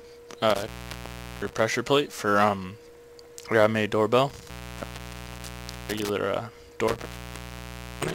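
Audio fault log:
0.50–1.60 s, 4.30–6.10 s, 6.88–8.15 s: intermittent contact. Sound drops out for about 0.74, 1.4 and 1.0 s, crackling at the edges, as a loose connection briefly breaks the signal path.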